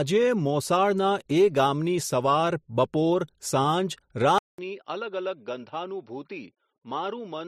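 Speech recording where the input likely switched to a poorer device at 4.38 s: after a 200 ms silence, the sound turns dull, cut off above 5.8 kHz, roughly 10 dB quieter, with faint new background noise.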